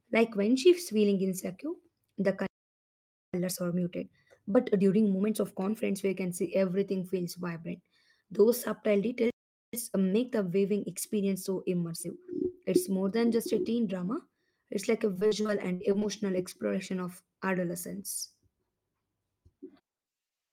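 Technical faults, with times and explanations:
2.47–3.34 s, playback stall: speech halts into about 0.87 s of clean silence, likely the player running dry, then resumes; unlike packet loss, nothing is patched or smeared.
3.34–6.34 s, time-compressed catch-up: speech runs hurried at 1.15 times speed with unchanged pitch, as small slices are cut and cross-faded to clear the backlog.
9.30–9.73 s, playback stall: another silent halt, about 0.43 s long, likely from a blocked output thread, heard as a clean pause rather than choppy fill.
9.73–12.73 s, time-compressed catch-up: speech is rushed at 1.1 times speed, pitch held, milder than the earlier catch-up.
15.13–16.05 s, repeated packet loss (robotic sound): nine short holes, the longest 61 ms, are each bridged by stretching the preceding sound, covering about a quarter of the stretch. The result is choppy rather than one silent gap.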